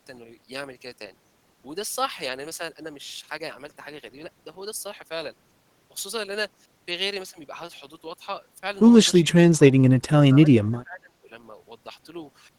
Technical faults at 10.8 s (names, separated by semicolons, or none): speech suppressed in double talk